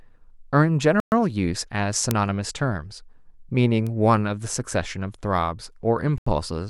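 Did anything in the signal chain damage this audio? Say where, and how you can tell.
Yes, in four places. The speech cuts to dead silence twice: for 120 ms from 1.00 to 1.12 s, and for about 83 ms from 6.18 to 6.27 s. This is likely a Bluetooth stall at the wireless playback stage. Interference delayed packets on the radio link, the headphones' buffer ran empty, and output paused until the resent packets arrived and filled it again.

Two isolated, sharp ticks land at 2.11 s and 3.87 s. Each is a single sample long, broadband, and unrelated to the speech around it. These are bit error spikes from a digital stage, either memory or a digital link. One flipped bit throws that sample's value off by a power of two, and the next sample returns to the true waveform. A one-sample step like that is heard as an instantaneous click spread across the whole spectrum.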